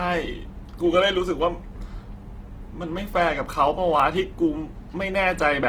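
From start to finish the speech sounds rough and grainy, with noisy detail. This is likely Opus compression in music mode, at a rate that fits about 16 kbps.

From 1.15 to 5.42 s a click recurs every 1.42 s, roughly four times. These are likely clock drift buffer slips: two clocks disagree by roughly 300 ppm, so about 15 samples are dropped or repeated each time.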